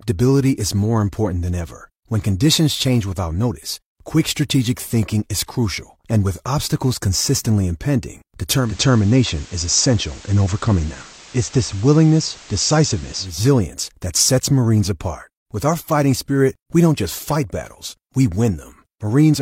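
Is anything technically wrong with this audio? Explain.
Yes. From 8.55 to 13.42 s the speech shows digital radio blending to analogue. The receiver lost its digital stream and cross-faded, over about 233 ms, to the FM broadcast of the same station, then faded back at the end. During that stretch, hiss sits around 25 dB below the speech. The level also shifts by about 1 dB at each blend.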